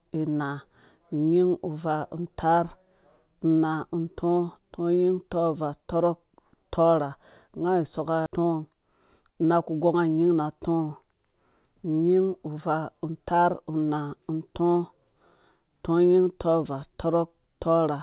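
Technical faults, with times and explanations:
8.26 to 8.28 s, skip ahead: the speech jumps forward abruptly with no gap, and about a second of audio is simply missing. A stretch of audio was thrown away while later audio was already waiting, likely when the jitter buffer overflowed, so the two sides are joined almost directly.
8.38 to 9.54 s, jitter buffer speed-up: right after the jump, the speech runs slightly faster, at about 104% speed with unchanged pitch. The receiver, still holding too much audio, trimmed short pitch-period pieces repeatedly, removing roughly 50 ms in total to reduce delay.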